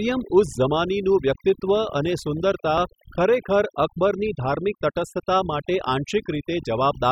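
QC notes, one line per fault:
Throughout: overdone noise removal. A noise reduction stage was set too aggressively on a noisy speech recording, so it cuts individual frequency bands down or out whenever their level sits close to its noise estimate, taking the softer parts of the voice with them. The result is a background pulled down but flecked with twinkling, chirpy specks.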